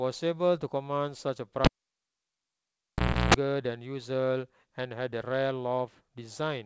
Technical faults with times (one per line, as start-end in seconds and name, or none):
1.64-3.34 cable pulled and plugged in